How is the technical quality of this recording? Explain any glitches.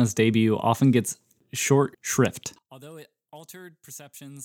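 The recording has one fault. From 2.59 s, after "often gets short shrift", to the end, the speech drops about 25 dB to a faint residue. The likely cause is one channel inverted, cancelling in mono. The waveform shrinks abruptly, and the spectrogram fades.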